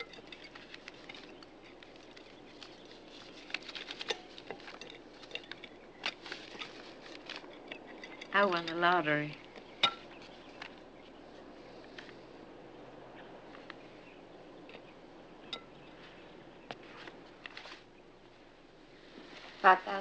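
No technical faults are audible, and the call-path coding simply leaves nothing above 8 kHz, consistent with a wideband codec.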